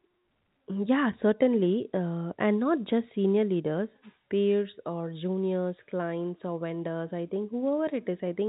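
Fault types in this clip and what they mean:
The speech sits within a telephone-band G.711 channel whose 4 kHz ceiling and faint level-following quantisation noise are ordinary for that format, and no technical faults can be heard.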